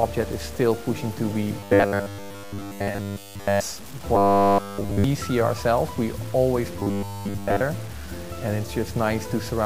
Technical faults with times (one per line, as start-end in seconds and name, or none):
0.00-9.65 low bit depth without dither
1.59-3.60 robotic sound from repeated short buffers
4.15-5.04 robotic sound from repeated short buffers
6.80-7.62 robotic sound from repeated short buffers